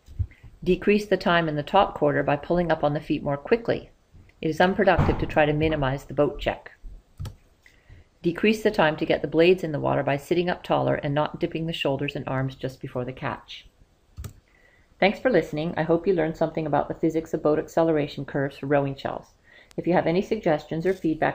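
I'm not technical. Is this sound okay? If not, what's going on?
No. At 19.71 s there is a bit error spike: a few digital values were corrupted, briefly jumping off course, producing one sharp tick unrelated to the sound.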